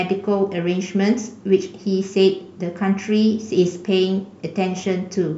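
Nothing stood out as a technical fault anywhere in the recording when listening to the speech.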